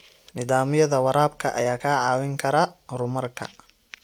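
At 0.35 s and again at 1.79 s, compressed frames are skipped: about one frame is missing each time, which fits a 23.2 ms codec frame. The speech jumps ahead by around 20 ms and leaves a brief smeared blip. A spectrogram shows a thin vertical seam where the harmonics shift abruptly, and the waveform shows a small discontinuity.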